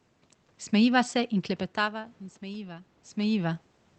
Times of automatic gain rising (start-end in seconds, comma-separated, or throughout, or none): 1.12-3.68